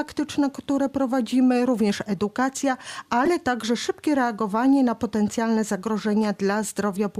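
A short, fairly loud chirp-like burst cuts into the audio from 3.25 to 3.28 s. It is a corrupt frame decoded: damaged bits in about two compressed frames were played anyway, so misread codes and gains put energy at wrong frequencies for that brief span.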